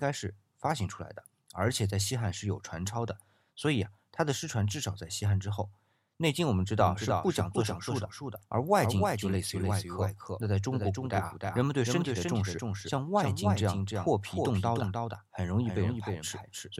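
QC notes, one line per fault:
6.83 s to end, doubled audio track: abrupt full-band copy about 300 ms late, roughly 5 dB down, no decay unlike echo; likely a slower second capture path.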